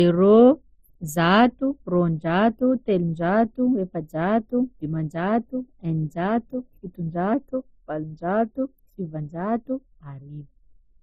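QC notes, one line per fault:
Throughout: transcoding between lossy codecs. The speech carries layered artefacts, with the different codecs' artefacts heard together and a hard ceiling leaving nothing above 15.6 kHz. Likely an MP3 encode at 33 kbit/s re-encoded to Opus at 48 kbit/s; Opus spent bits on MP3's damage and added its own.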